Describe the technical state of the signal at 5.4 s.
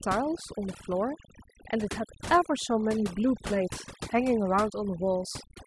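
At 5.4 s the speech carries overdone noise removal, present throughout the clip. Frequency bands sitting close to the estimated noise floor are pulled down hard or cut entirely, so the background drops and breaks up into twinkling specks.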